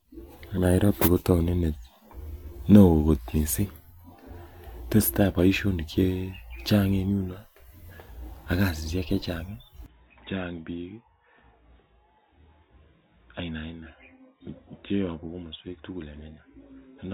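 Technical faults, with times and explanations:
9.86–17.13 s, input switched to a poorer device: the speech suddenly turns dull and boxy, with nothing above 3.8 kHz, drops roughly 10 dB in level and gains a faint new noise floor, with no gap. The likely cause is the input changing to a narrower-band microphone.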